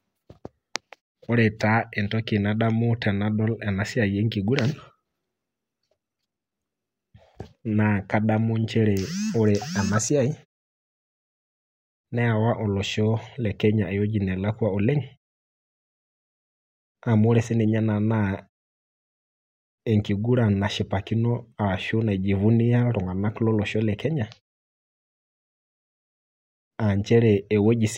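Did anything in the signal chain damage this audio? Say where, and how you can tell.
No, nothing in the signal chain has damaged this speech recording. The background fades to silence in the pauses and comes back in time for each next phrase, so no speech is lost there.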